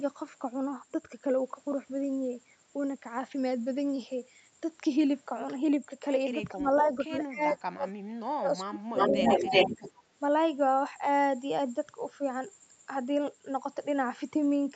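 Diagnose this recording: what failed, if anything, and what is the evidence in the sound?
Speech suppressed in double talk shows up at 6.53 to 7.9 s and again at 8.25 to 9.52 s, where the speech dips by up to about 30 dB and breaks into pieces, roughly a second of it in the first stretch and a bit less in the second. On a waveform the envelope collapses in ragged notches; a spectrogram shows broadband gaps with the harmonics vanishing. The stage is call processing: the echo canceller likely mistook simultaneous far-end activity for echo and attenuated everything.

An echo leak follows at 8.98 to 9.92 s: a second copy of the speech, delayed by about 362 ms and roughly as loud as the original, overlaps the direct sound. A spectrogram would show the same harmonic pattern repeated about 0.36 s later, and the waveform shows doubled syllable envelopes. The cause is likely a loudspeaker-side echo canceller failing to remove its microphone pickup, so the residual was transmitted back. 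It sits within the 8 kHz band of the Opus path.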